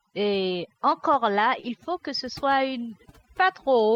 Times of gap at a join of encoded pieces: none

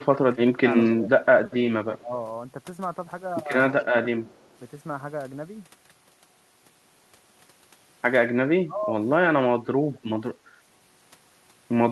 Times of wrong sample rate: none

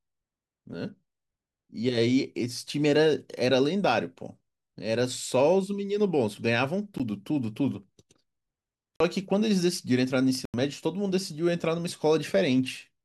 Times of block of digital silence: 6.98, 8.96-9.00, 10.45-10.54

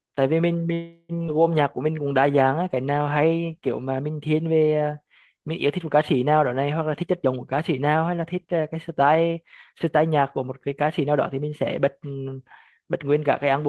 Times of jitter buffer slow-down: 1.62-3.30

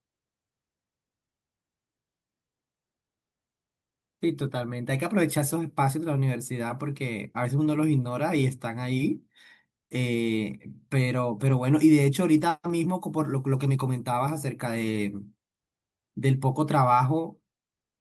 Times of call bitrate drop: none

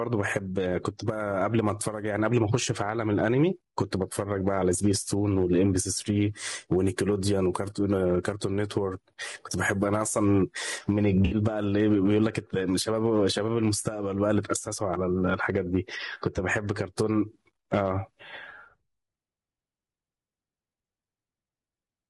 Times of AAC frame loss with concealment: 11.25-11.35

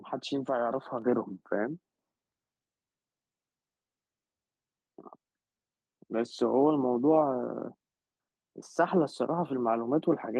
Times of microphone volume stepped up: 1.02

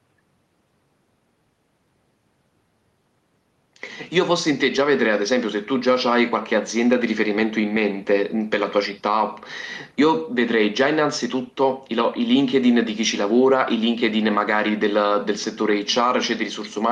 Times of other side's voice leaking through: none

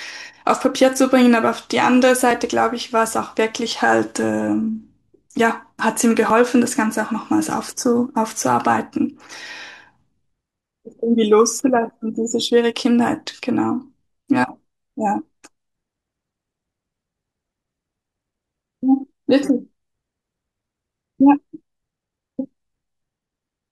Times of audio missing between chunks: 2.31, 6.30, 10.30, 14.29

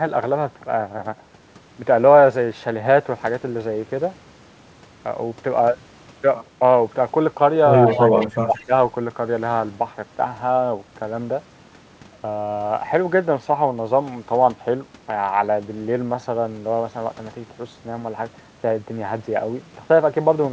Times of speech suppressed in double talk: 7.92-8.72

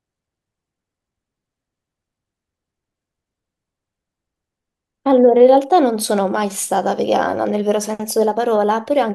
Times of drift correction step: 7.91-9.09

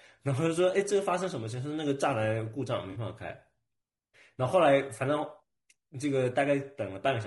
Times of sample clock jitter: none

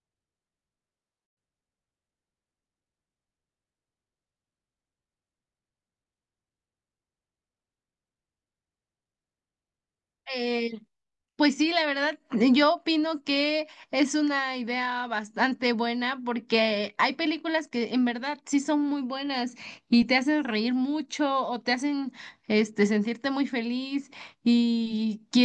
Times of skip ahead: none

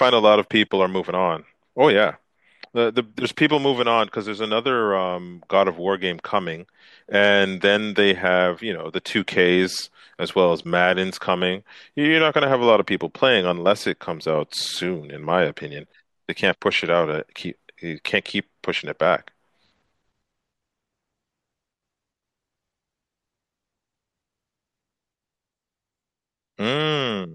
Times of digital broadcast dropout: none

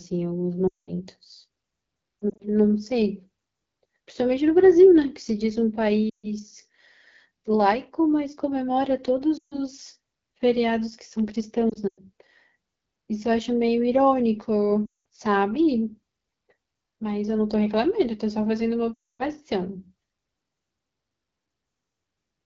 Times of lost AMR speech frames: 0.67-0.91, 2.22-2.42, 6.09-6.28, 9.38-9.59, 11.70-12.01, 14.86-14.98, 18.94-19.25

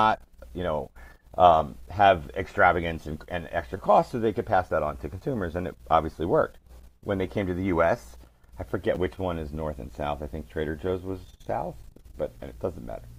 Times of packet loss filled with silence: none

